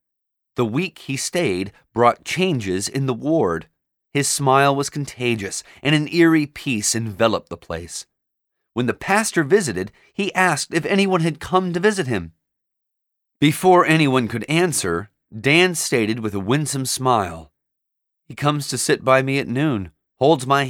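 Nothing goes wrong anywhere in the speech here, so there's no fault to point to at any moment.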